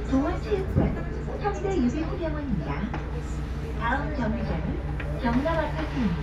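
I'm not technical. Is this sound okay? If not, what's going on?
Yes, nothing wrong can be heard in this clip of sounds: no dropouts, glitches or distortion anywhere in it.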